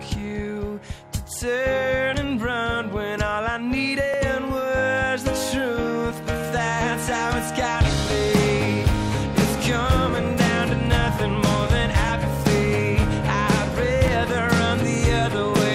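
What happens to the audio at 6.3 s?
Periodic USB or driver dropouts run through this point, part of a series spanning 0.15 s to 14.08 s and repeating every 1.99 s. At a fixed interval a background task stalls the USB bus or audio driver, and roughly 10 ms of audio is skipped outright rather than filled with silence. Each gap splices the waveform together abruptly, so around 6.3 s you hear one of the evenly spaced ticks or pops in the sound.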